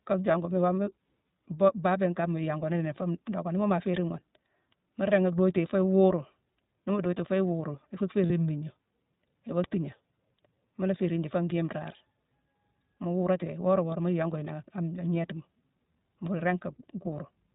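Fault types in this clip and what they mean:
iLBC codec: The speech is dull and boxed-in, with nothing above 4 kHz, and it carries a plainly audible rough, slightly synthetic edge. This comes from a narrowband VoIP codec that codes the excitation of each short frame without relying on the previous one. That independence costs fidelity, and here the grain is clearly heard throughout. The sound fits iLBC's 15.2 kbps mode with 20 ms frames.
lost iLBC frames: Three brief spots replace the speech with a held, faintly buzzy or breathy vowel-like tone: 0.32 to 0.35 s, 3.92 to 3.94 s, and a longer one from 8.26 to 8.32 s. Packets went missing, and the decoder filled each gap by repeating the last pitch cycle mixed with noise. The lengths fit one lost 20 ms frame at the first two spots and two at the third. The voice recovers almost immediately afterwards.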